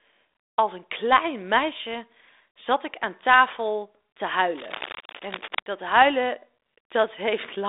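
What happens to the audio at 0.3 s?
Nothing goes wrong at 0.3 s: the speech there passes intact through its narrowband telephone path, which carries nothing above about 3.8 kHz.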